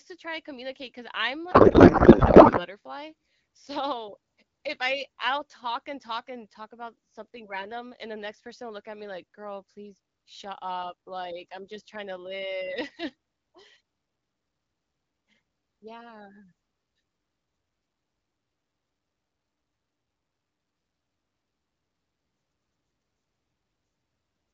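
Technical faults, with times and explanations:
1.51 to 2.66 s, codec payload misread: for just over a second the speech gives way to garbled noise and warble that barely tracks it, then clear speech returns. The decoder seems to be unpacking well-formed frames with every field out of place, which fits octet-aligned AMR being read as bandwidth-efficient, so the decoder's vocal tract model is driven by scrambled parameters. Outside this stretch the AMR wideband (HD Voice) codec at 12.65 kbit/s shows only light coding damage.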